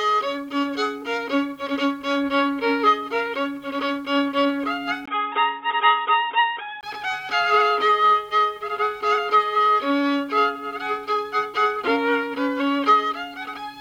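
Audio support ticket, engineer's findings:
Input switched to a poorer device, 5.06–6.83 s: brief gap at 5.06 s, then dull, band-limited sound with nothing above 3.8 kHz, faint new noise floor, level unchanged. Likely a mid-recording input switch.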